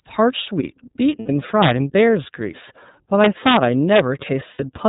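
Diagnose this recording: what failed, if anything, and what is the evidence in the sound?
The speech runs through the iLBC codec for its whole length, and the damage is plainly audible. Nothing passes above 4 kHz, and the voice has a slightly rough, synthetic grain. The sound points to the 13.33 kbps mode with 30 ms frames. On a spectrogram the energy stops at a hard ceiling at 4 kHz. The codec stage models the excitation of each frame on its own, so the roughness is steady rather than smeared from frame to frame.

Lost iLBC frames show up twice, from 1.19 to 1.29 s and from 4.53 to 4.60 s. These are network losses of about 90 ms and 60 ms, which fits three and two 30 ms frames. In each gap the decoder repeats the last pitch cycle mixed with noise, so the sound becomes a held, buzzy, breathy vowel. On a spectrogram the harmonics run flat and unchanging, and the voice returns almost at once afterwards.

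Integer overflow breaks in at 1.62 to 1.71 s and at 3.96 to 4.00 s. The first event overdrives the limit by about 4 dB and the second by about 1 dB. Both give violent cracks that are sharper than clipping. The fault is in sample-format conversion or a gain stage. A sum that went past the largest integer wrapped to the opposite sign instead of being limited. On the waveform the peaks jump from one rail straight to the other.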